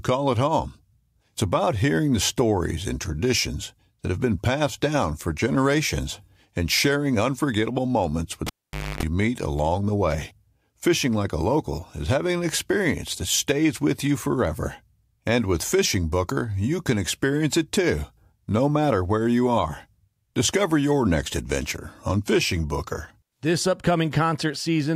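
A cable pulled and plugged in interrupts this speech recording from 8.47 to 9.03 s. A sharp pop marks the live lead coming out, and the signal then drops to near silence for about 0.51 s. As the plug goes back in, only its tip touches at first, so the unshielded contact picks up roughly 0.27 s of 50 Hz mains buzz. A second pop follows when the connection fully seats and the speech returns.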